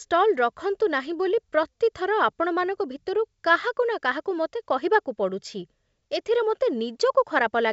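No technical faults are audible anywhere in the speech.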